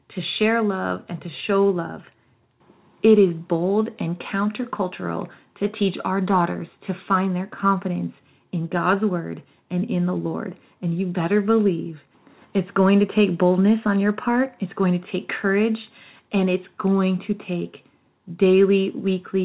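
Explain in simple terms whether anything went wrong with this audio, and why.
Nothing went wrong with this audio; the speech simply comes through an ordinary phone-quality call line, which carries nothing above about 4 kHz.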